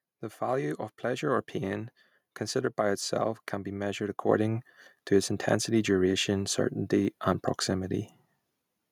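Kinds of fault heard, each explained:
Microphone volume stepped up: the input gain on the capture device was raised in a single jump, as software does when it judges the microphone too quiet. At about 4.29 s, just after "itself can be measured", the level rises abruptly by about 5 dB with no fade. Speech and the background noise floor step up together, which marks this as a gain change at the device input rather than the talker speaking louder.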